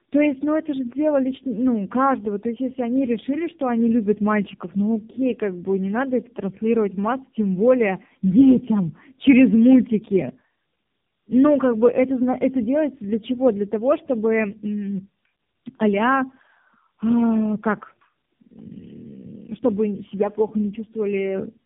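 From start to finish the speech carries tandem speech coding. It was decoded and re-encoded at several network borders, each coder working on the previous one's degraded output. The band stops at 3.7 kHz, and the muffled, warbly quality points to a model-based coder like AMR-NB at around 7 to 8 kbit/s. What separates this from a single low-rate codec is the added roughness and noise layered on top, which one coding pass alone would not leave.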